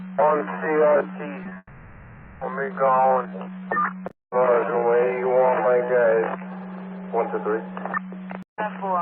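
From the start to 6.52 s, a time-stretched section likely comes from software slowing the audio to about 0.53 times its original speed while holding pitch by repeating short pieces. The pace drags noticeably, with pitch unchanged.

Within that stretch, short concealed packet loss occurs at 1.43 to 1.47 s, 1.49 to 1.53 s and 1.53 to 1.57 s, each time 20 ms of audio failing to arrive and being filled from the preceding sound. These produce quick smears and small wobbles in close succession.

A long network dropout likely follows from 1.57 to 2.43 s, when nothing arrived for 0.84 s and the receiver kept extending the last sound. That comes through as a fading synthetic buzz or hiss ending in a brief silence of about 30 ms before real audio resumes with the lost portion gone.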